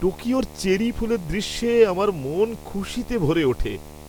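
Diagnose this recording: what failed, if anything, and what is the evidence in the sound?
Something failed in the analogue wiring: there's video or display buzz running under the speech for the whole clip. It's a steady 75 Hz buzz with a gritty hash riding on top, sitting about 20 dB below the speech. That 75 Hz is a picture field rate, which points to a monitor or video cable coupling its refresh signal into the audio lines, through shared grounds or cables run side by side.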